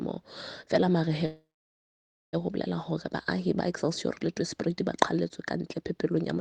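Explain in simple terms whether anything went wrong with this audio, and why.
From 1.25 to 2.35 s there is a call audio freeze. The last sound briefly trails off, then about 0.9 s of near-silence follows, likely because packets were held up in transit. Unlike a dropout, nothing is lost: the audio resumes where it stopped, just about 1.1 s late.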